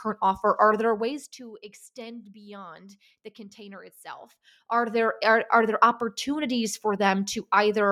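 No technical faults can be heard in this speech clip. The level holds steady throughout, with no fader-style dips or rises.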